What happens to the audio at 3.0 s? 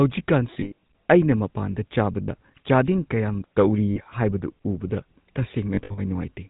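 At 3.0 s the speech carries GSM full-rate codec damage. It is not a local event; it runs through the whole clip. The codec rebuilds speech from a model of the vocal tract, fed by evenly spaced pulses that keep only every third excitation sample. Nothing above 4 kHz gets through. The result is plainly audible: a muffled top end with a buzzy, gravelly roughness on the voice. The heavy reduction fits a 13 kbps codec.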